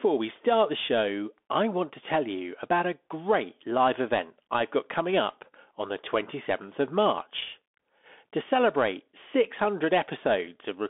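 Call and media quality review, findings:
Bluetooth CVSD headset codec active on the call path for the whole clip, which fits a 64 kbps narrowband headset link. The one-bit delta modulator's adaptive step cannot follow fast, loud high-frequency content, so those peaks distort. Band limited to roughly 250 Hz to 3.5 kHz, nothing above 3.8 kHz. Plainly audible damage: scratchy s sounds, granular hiss beneath the speech, thin and muffled tone.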